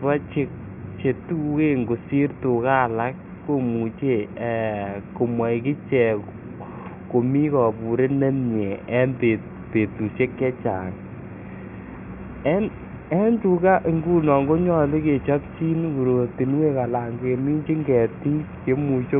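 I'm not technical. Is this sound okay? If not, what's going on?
Yes, there's nothing wrong with this recording.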